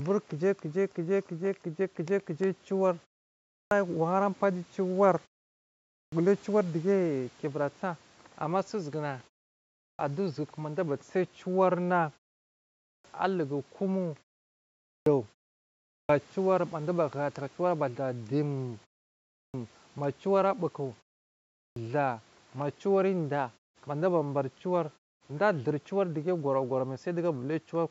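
At 3.34, 5.75, 9.58, 12.67, 14.66, 15.67, 19.13 and 21.38 seconds, the speech has a clipped start after a pause. Each comes after a gap of 0.35 to 0.57 seconds. The output device sleeps in that silence. It then needs time to wake. Meanwhile 370 to 420 ms of sound is lost. Each phrase bursts in abruptly, missing its opening sounds.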